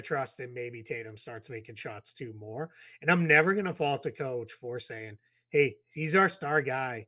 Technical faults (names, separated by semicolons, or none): none